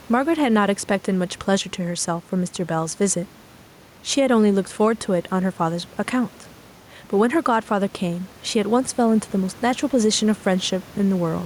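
Speech recorded with gain pumping throughout, with the gain swinging by roughly 5 dB. The room noise sits about 30 dB below the speech. The likely cause is input gain set far too high, with a fast limiter or compressor clamping down on each peak, leaving loud and quiet passages squeezed close together.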